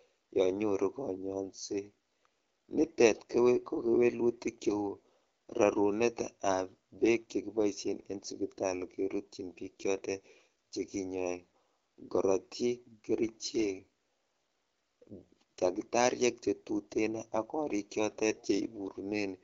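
AMR bit errors at 18.34 to 18.43 s: flipped low-priority bits misplace excitation pulses and skew gain values, so the speech turns briefly scratchy and gargly.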